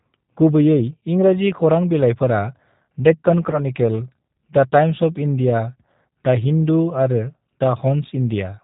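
The clip is speech carried through a G.729 codec for its whole length, and the damage is plainly audible. The band stops at 4 kHz, so sibilants and breath lose their top end. Vowels have a rough, slightly synthetic edge from rebuilding the signal out of a vocal tract filter, a pitch predictor and a handful of pulses per subframe. That character fits an 8 kbit/s G.729A stream. At 3.51 s there is VoIP packet loss concealed by the speech codec. The audio briefly smears into a buzzy tone or coloured noise that sags in level, which fits about 20 ms of missing audio, roughly two 10 ms frames. The decoder extended its last pitch and filter state to fill the gap. Because each frame's state feeds the next, the sound stays weakened and distorted until about 3.64 s, well after the loss itself ends.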